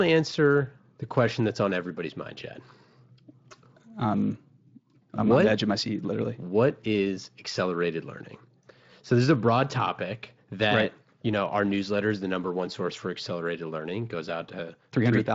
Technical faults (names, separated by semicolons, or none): none